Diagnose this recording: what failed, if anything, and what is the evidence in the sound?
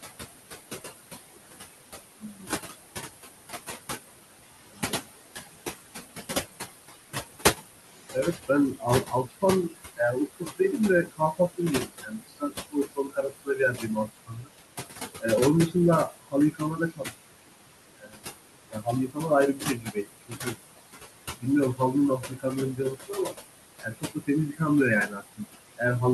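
The fault sits in call processing, in the noise suppressor. The room noise is only about 7 dB below the speech, so the suppressor works hard throughout. Between phrases the background drops by about 17 dB, then swells back under the speech. The suppressor sets a gain for each frequency band, frame by frame, and those gains keep jumping.

The same stage also cuts speech. This happens from 8.14 to 14.5 s, 15.2 to 17.13 s, 17.98 to 20.57 s, and 21.4 to 25.82 s. Soft consonants, word endings and quiet stretches are pulled down by about 21 to 22 dB at the deepest. That adds up to roughly two seconds in the first span, about a second and a half in the last, and less in the middle two. Quiet speech bands fell below the suppressor's noise estimate and were removed as noise. The codec is not the cause. The Opus audio keeps its top band up to 12 kHz through these spans.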